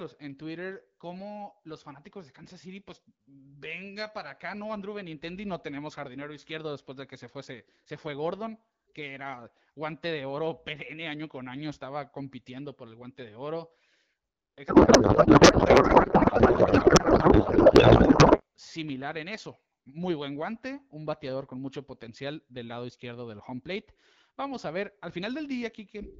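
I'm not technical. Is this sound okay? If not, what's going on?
No. A codec payload misread runs from 14.67 to 18.42 s, ending just before "similar en eso muy". The two ends of the call packed the voice data differently, so the speech there becomes garbled warbling noise.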